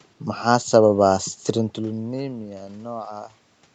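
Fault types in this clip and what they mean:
Nothing here counts as a fault; the change in level around 1.5 s is just the talker shifting relative to the microphone, and the room noise and the call's usual band limit near 8 kHz are normal for a call.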